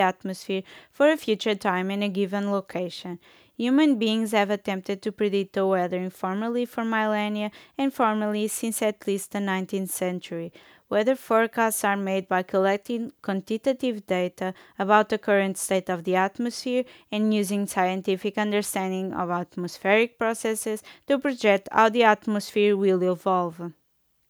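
No technical faults can be heard anywhere in the speech recording. Nothing interrupts or alters the sound at any point.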